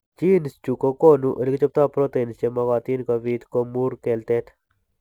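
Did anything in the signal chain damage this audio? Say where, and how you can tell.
Yes, at the converter: sample clock jitter runs through the whole speech clip. A faint hiss rides under loud, bright passages and vanishes in pauses, sitting roughly 45 dB below the signal. On a spectrogram, broadband noise tracks high-energy regions while silent gaps stay dark, which fits a clock wobbling by a couple of microseconds.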